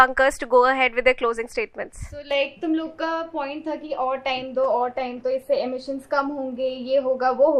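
At 4.65 s there's a call bitrate drop, and it hangs around until about 5.93 s. It sounds like the bandwidth estimate collapsed and the encoder got squeezed hard, which fits a fall from around 128 kbps down to roughly 23 kbps. For about 1.2 s at the bottom the sound goes coarse and a bit watery, with the top end shaved off so it turns muffled. Then it opens back up as the rate recovers.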